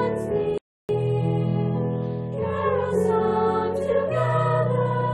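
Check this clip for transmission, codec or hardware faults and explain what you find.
One fault is present. From 0.58 to 0.89 s there is a playback stall: the sound cuts out mid-flow and the output stays silent for about 313 ms before resuming. The likely cause is the player running short of data or its thread being blocked.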